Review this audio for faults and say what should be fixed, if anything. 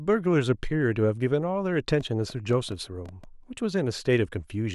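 From 2.01 s to 3.25 s a train of clicks ticks over the speech, about ten sharp pops at an uneven pace averaging around 6.5 per second, each peaking at roughly the level of the speech itself and similar in shape. The likely cause is interference from nearby equipment or a faulty connection or power supply injecting brief pulses into the signal path. This section needs repair, either by de-clicking or by re-recording it. To prevent it, keep phones and other electronics away from the recording chain, use shielded cables, and check that the interface has a stable connection and enough buffer headroom.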